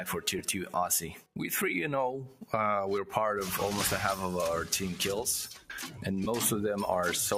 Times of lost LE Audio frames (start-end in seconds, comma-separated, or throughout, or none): 0.39, 6.24-6.27